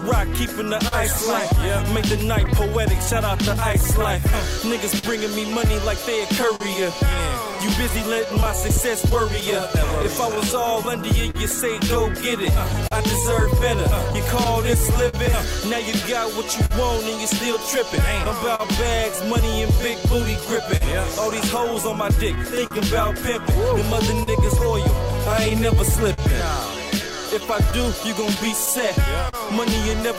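The whole clip carries clock drift between sender and receiver: the sending side's clock runs around 3 percent slow, so the receiver's jitter buffer keeps draining and has to be topped up, and that shows as small timing hiccups recurring at uneven spacing throughout the audio. Those repeated timing corrections run from 0.18 s to 25.76 s, where the receiver keeps repeating short pieces to stay in step, playing the stretch at 99 percent speed and padding in something like 150 ms overall, at most a slight unsteadiness in the tempo. On top of that there are scattered short gaps in two stretches. From 0.26 s to 18.61 s there are around thirty of them, and from 20.77 s to 29.35 s around fifteen more. In both stretches each hole gets patched by stretching the last bit of sound, the longest being around 50 ms, so they come across as brief ticks and smears rather than clean dropouts. The fill adds up to roughly half a second in the first stretch and about 300 ms in the second, around 3 percent of each span.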